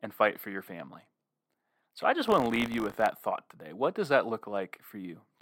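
From 2.26 to 3.08 s, buffer tearing: a 50 Hz rattle as a small slice of each period replays audio from roughly 40 ms earlier. Unlike mains hum, it sounds only with signal.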